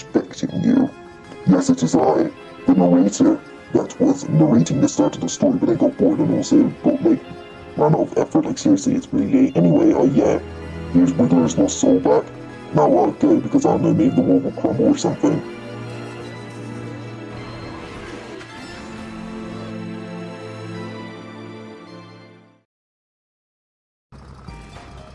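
Listening through the recording, nothing stood out as a technical fault at any point.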